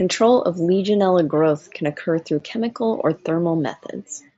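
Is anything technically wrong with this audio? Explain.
Yes. At about 2.40 s, between "growth can occur through" and "chemical or", the speech drops out for a moment with a sharp-edged gap that can click. This is unconcealed Bluetooth headset packet loss: one voice packet of about 7.5 ms, carried over the mSBC wideband link, never arrived, and silence or an idle pattern filled its place without any smoothing.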